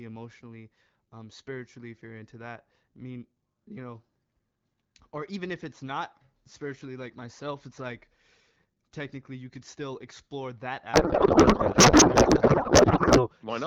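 After "could still explore that", from 10.93 s to 13.29 s, a codec payload misread sets in. The AMR frames are octet-aligned but decoded as bandwidth-efficient, so fields land in the wrong places. The speech turns to garbled noise and warble that barely tracks it. The light AMR wideband coding before this stays clear.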